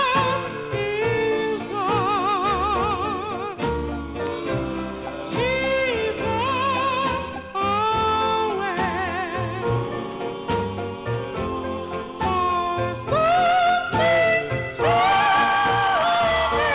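No technical faults can be heard anywhere in the audio. It has come through a call path, with nothing above 4 kHz, which fits a narrowband G.711 mu-law connection.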